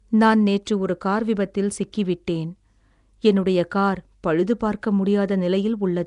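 From start to finish the speech carries a rough, hissy halo and a smeared, underwater quality, with the damage plainly audible and nothing above 10.7 kHz. The likely cause is Nellymoser compression: the old Flash microphone codec codes audio in short blocks at a fixed two bits per sample, starves weak bands of bits entirely and fills them with noise, giving the grainy texture heard here, at a rate that fits about 44 kbps.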